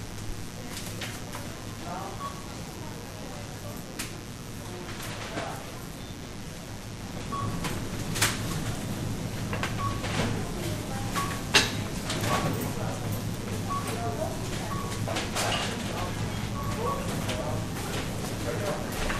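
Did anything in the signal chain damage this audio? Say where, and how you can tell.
Yes. In the analogue wiring, a raspy 60 Hz mains buzz runs throughout at about 15 dB below the sound. Its sharp switching spikes add harmonics into the kilohertz range, unlike a smooth hum.

At the codec stage, the whole clip sounds dull with gurgling, granular distortion and flickering upper bands, likely MP2 compression at a low bitrate near 80 kbps, which starves sub-bands of bits.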